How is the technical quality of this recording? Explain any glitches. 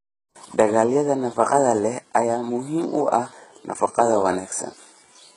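The recording is heavily damaged by low-bitrate compression throughout its length. The likely cause is HE-AAC compression, and the heavy damage fits a bitrate near 12 kbps. Only the lower spectrum is truly coded; the treble is rebuilt by copying lower bands upward under a coarse envelope, so its harmonics don't line up with the real ones. S sounds come out gritty and metallic. A spectrogram shows a hard ceiling at 11.1 kHz, with blocky, repeated-looking texture in the upper bands below it.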